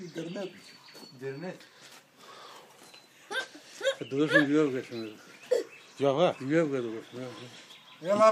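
No technical fault can be heard anywhere in the audio. There is nothing to place in time and no cause to point to.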